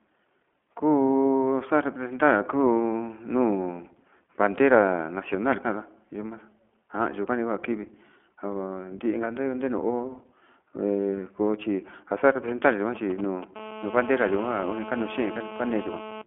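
Speech coded with the iLBC codec for its whole length, with a nearby 2G phone breaking into the last few seconds. The iLBC coding gives the voice a slightly rough, synthetic edge, the plainly audible damage of a narrowband coder that builds each 20 ms frame's excitation independently. On a spectrogram the energy sits in a telephone band of roughly 200 to 3400 Hz, with nothing at all above 3.7 kHz, and the sound fits iLBC's 15.2 kbps mode. From 12.48 to 13.44 s come GSM signalling bursts: a galloping dit-dit-dit of brief buzzes repeating at about 217 Hz, at a level of roughly 15 dB under the speech. They come from a handset exchanging short radio bursts with the network, which the audio circuit rectifies into sound. A spectrogram shows them as short vertical clusters of stripes spaced 217 Hz apart, and the waveform shows small grouped spikes. From 13.56 to 16.22 s this becomes a continuous GSM phone buzz, a hard, raspy 217 Hz tone about 12 dB below the speech that bears no relation to it. 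It comes from the phone now transmitting steadily in a call, pulsing its radio 217 times a second into the rectifying circuit. It appears as an unbroken comb of horizontal harmonic lines up to the band limit, and as a regular pulse train riding under the waveform.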